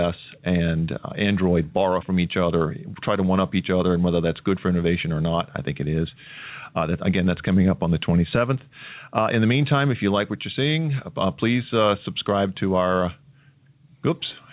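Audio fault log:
Throughout: gain pumping, level swinging around 5 dB as louder speech pulls the gain down, likely a fast limiter clamping excessive mic gain.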